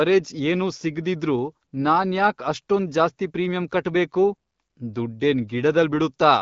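Speech clip with no technical faults to report.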